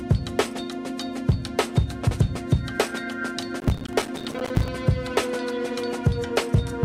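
From 3.60 to 4.68 s there's processor overload crackle: the system keeps missing its roughly 5 ms buffer deadlines, dozens of them, and each drops a tiny gap of silence, giving gritty tearing.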